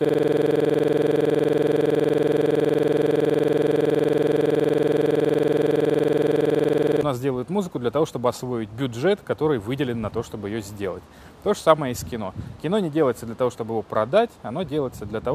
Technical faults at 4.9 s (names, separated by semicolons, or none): system hang loop